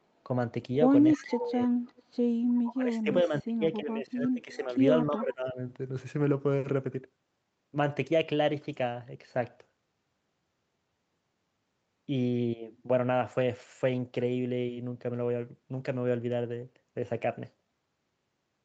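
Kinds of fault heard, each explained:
Echo leak: Faint, delayed copies of the speech, about 15 to 30 dB below it, surface in brief scraps near 1.12, 1.88, 2.55 and 5.17 s, trailing by about 0.3 s. An echo canceller at a loudspeaker end likely let part of its microphone pickup return.
Speech suppressed in double talk: The speech dips by up to about 20 dB and turns patchy from 1.16 to 1.73 s, 2.64 to 4.78 s and 5.07 to 5.6 s as both sides overlap, likely because the echo canceller could not separate talker from echo and lowered both.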